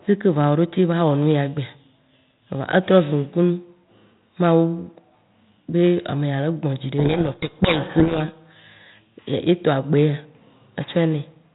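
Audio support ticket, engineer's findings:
Codec payload misread, 6.98–8.21 s: speech buried in harsh distortion, abrupt onset and clean recovery. Receiver unpacking G.726 code words in the wrong bit order. Unlike low-bitrate G.726 rasp, it is confined to this window, with light 32 kbit/s coding on either side.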